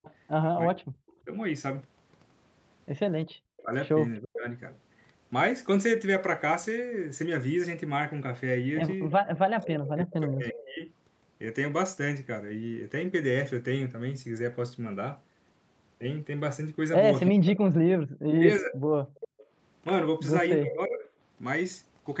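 Right from 0.04 s to 1.13 s there's a faint delayed copy of the speech trailing about 343 ms behind, well down in level. That's an echo leak, most likely a loudspeaker whose echo canceller didn't scrub everything its mic picked up, so some of it came back. It returns from 9.1 to 10.66 s, noticeably louder, and again from 17.27 to 19.28 s, where it sits only around 10 dB under the speech. The same 343 ms delay every time points to one echo path.

Overlapping those stretches you get speech suppressed in double talk: 0.66 to 4.46 s, 9.37 to 10.83 s and 17.33 to 21.06 s. With both sides active, the canceller apparently couldn't tell the local talker from the echo and clamped down on both. You hear the speech dip and drop out in pieces, adding up to under a second in the first stretch, roughly a second and a half in the second and about a second in the third. The deepest dips go from around 25 dB early on to something like 40 dB in the last stretch.

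Then there's background gated by the echo canceller. At 3.26 to 3.33 s the room tone ducks by about 19 dB for just a blink. At 19.08 to 19.51 s it goes much harder, about 38 dB for nearly half a second. That's the canceller slamming the mic down while the loudspeaker plays, and the room sound snaps back when it lets go. The whole thing sits inside the 8 kHz band of the Opus call path.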